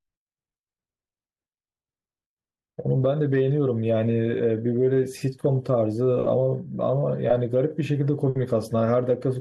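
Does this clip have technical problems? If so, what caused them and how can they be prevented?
No, the signal shows no technical problems: levels, continuity and frequency content stay steady across the whole recording.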